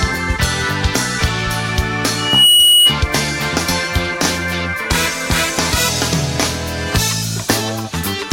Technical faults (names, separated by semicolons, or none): loudspeaker feedback squeal